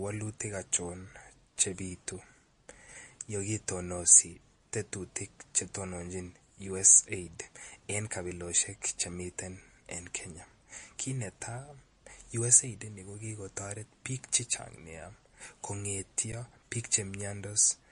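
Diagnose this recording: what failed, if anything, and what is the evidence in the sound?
Throughout the speech the sound is watery and swirly, with the weaker spectral detail flickering in and out from moment to moment, and nothing at all above 10.6 kHz. The codec stage is the likely cause, specifically MP3 compression. Starved of bits, the encoder dropped quiet frequency lines frame by frame and applied a fixed treble cut-off. The damage is plainly audible, which fits a low bitrate of around 40 kbps.

At 16.32 s the sound briefly freezes for about 10 ms. The waveform goes flat at a constant level, so there is no sharp break. This is an underrun with held sample at the driver or buffer stage. The output buffer ran dry, and the converter kept repeating its last value until data arrived again. Essentially no audio was lost, since playback resumed where it had stopped, so the return is soft rather than a hard click.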